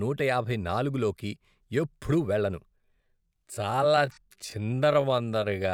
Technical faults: time-stretched section

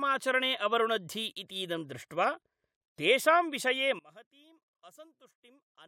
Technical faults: one channel inverted

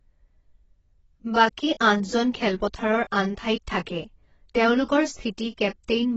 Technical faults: AAC compression

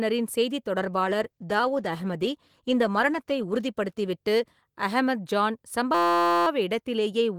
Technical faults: call bitrate drop; system hang loop

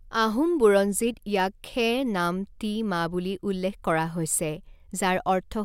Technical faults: none

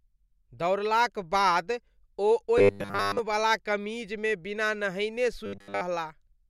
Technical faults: robotic sound from repeated short buffers

